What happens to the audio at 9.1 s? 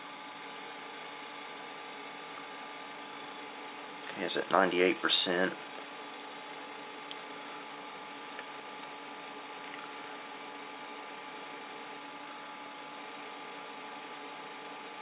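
Nothing goes wrong at 9.1 s: the audio carries on intact through that moment, still band-limited by the call path so that nothing is heard above 4 kHz, with no dropout, glitch or change in level.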